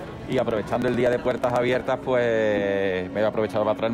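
Periodic USB or driver dropouts run from 0.08 s to 1.87 s: something blocks the audio path every 62 ms, and each time a couple of milliseconds of audio is skipped outright rather than filled with silence. Around thirty of these splices occur, each one a sudden jump in the waveform, so the sound carries a regular ticking at about 16 per second across that stretch. The ticks stop after 1.87 s.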